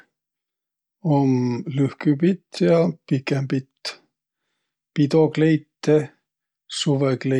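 No technical faults can be heard in the recording.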